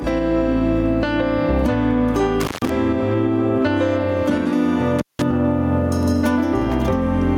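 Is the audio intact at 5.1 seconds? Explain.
No. From 4.99 to 5.22 s the sound drops out or breaks up, with crackle at both edges and faint hiss during the gap of about 180 ms. This is an intermittent contact, where a loose cable or plug briefly opens the signal path. Underneath, the gain swings by around 10 dB, squashing loud and soft parts together. That gain pumping likely comes from the input gain being set far too high, with a fast limiter or compressor pulling it down on each loud sound.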